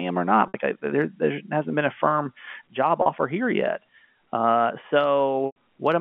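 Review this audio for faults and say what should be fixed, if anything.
Brief held, buzzy stretches break into the speech at 0.48 s and 3.02 s, lasting 60 and 40 ms, and at 5.46 s a 100 ms loss fades into silence before the speech returns with a short cross-fade. This is packet loss with pitch repetition: the receiver loops the last pitch period to fill missing packets. Reducing network loss or adding forward error correction would prevent it.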